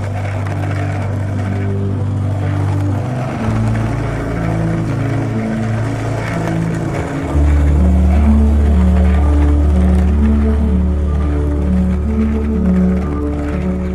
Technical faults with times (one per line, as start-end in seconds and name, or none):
none